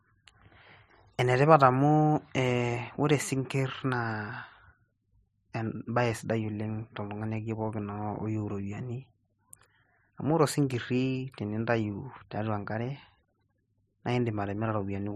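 From 0.19 s to 15.08 s, clock slip clicks tick through the speech about ten times a second, likely from two unsynchronised clocks about 200 ppm apart, each slip dropping or repeating one sample. Unlike random digital clicks, they keep a steady, even spacing.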